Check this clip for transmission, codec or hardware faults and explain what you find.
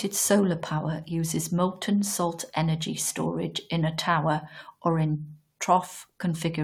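No faults were detected in this recording.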